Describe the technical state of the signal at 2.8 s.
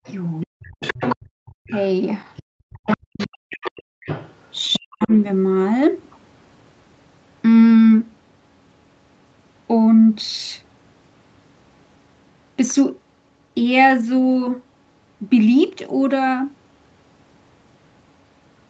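A faint second voice sits behind the talker, roughly 15 dB below the speech. This is the other side's voice leaking through, running from 0.05 to 5.29 s, most likely because the device's echo canceller left part of the loudspeaker playback in the microphone signal.

From 2.81 to 3.48 s the talker's own speech dips sharply, falling by as much as around 40 dB over about half a second in total. This is speech suppressed in double talk: with both sides talking at once, the canceller likely could not tell the talker from the echo and turned everything down.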